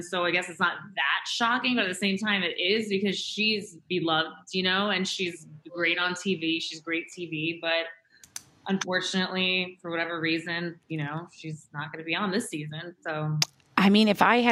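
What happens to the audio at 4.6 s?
Nothing goes wrong at 4.6 s; the audio carries straight through that moment with no dropout, click, glitch or other audible fault.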